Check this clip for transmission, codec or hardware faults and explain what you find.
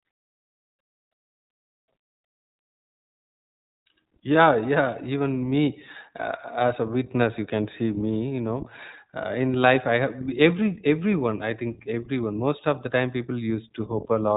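One codec fault runs through the whole speech clip. The iLBC codec codes each 20 ms frame independently and removes everything above 3.8 kHz, leaving speech clear but rough and synthetic, consistent with the 15.2 kbps mode. Unlike plain band-limiting, the damage is plainly audible as grainy excitation.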